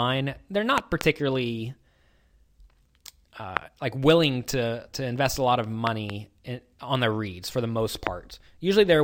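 Sharp loud pops about 20 dB above the speech, doubled at 0.78–1.03 s and 5.87–6.12 s, single at 3.57–3.59 s and 8.07–8.09 s, likely from voltage pulses such as static or a switch.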